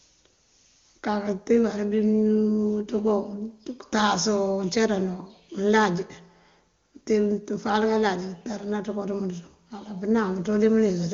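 No technical faults are audible in this speech.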